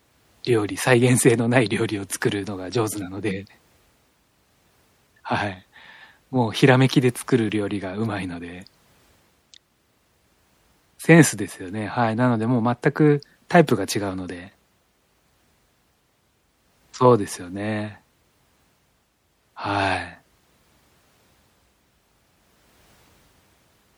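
MP3 compression artefacts run throughout the speech, from start to finish. The damage is plainly audible, which fits a low bitrate of about 64 kbps. The encoder likely ran short of bits, so it dropped treble and let weak frequency lines flicker between frames, leaving a watery, swirly texture.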